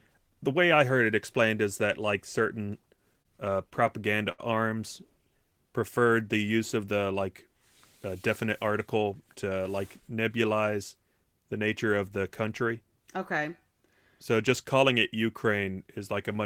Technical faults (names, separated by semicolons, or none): repeated stalls (stutter); jitter buffer slow-down; jitter buffer speed-up